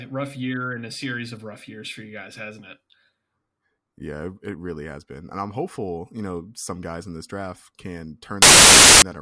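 At 8.42 s the speech cuts to a hard-edged burst of very loud white noise lasting until 9.02 s. This is file tags played as audio: an embedded cover picture, stored as compressed data, is being decoded as samples, so its near-random bytes come out as static.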